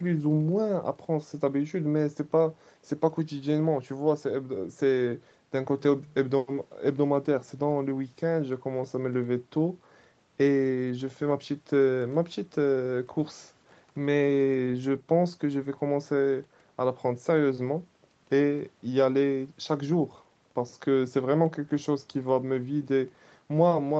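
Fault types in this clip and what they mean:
No faults can be heard in this speech clip. It has been through a call's microphone processing and codec path, and nothing is heard above about 8 kHz, which fits a wideband Opus call setting.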